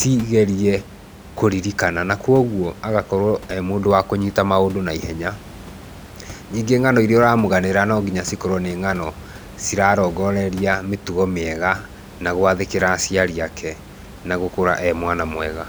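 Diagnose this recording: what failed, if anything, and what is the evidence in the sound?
Nothing failed in this recording.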